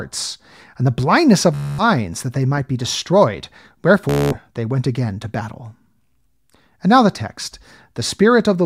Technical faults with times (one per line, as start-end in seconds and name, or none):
1.55-1.84 Bluetooth stutter
4.09-4.39 Bluetooth stutter